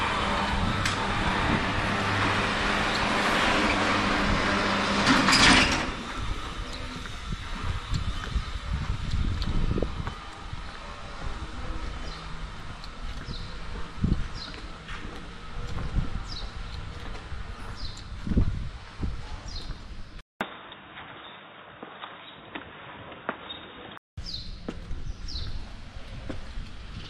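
At 20.21 s a 200 ms silence opens. Until 24.18 s the sound is boxy and capped at 3.8 kHz, about 5 dB different in level, over a new faint hiss. This is likely an input switched to a poorer device. A spectrogram shows a flat ceiling, and the waveform shows the gap.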